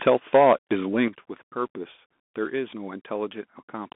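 Throughout, the speech carries Bluetooth CVSD headset codec damage: nothing passes above 3.8 kHz, the line band sits near 200 Hz to 3.5 kHz, and a granular hiss and scratchy sibilants fit a 64 kbps one-bit delta link. From 0.07 to 0.73 s, peaks flatten and crackle, running about 7 dB past the converter's limit with roughly one sample in twenty clipped, likely microphone overload. A shorter, milder burst at 1.0 to 1.05 s exceeds the limit by about 2 dB. At 1.08 s the whole signal drops about 8 dB in a single step, likely the microphone volume stepped down by the call software reacting to the clipping.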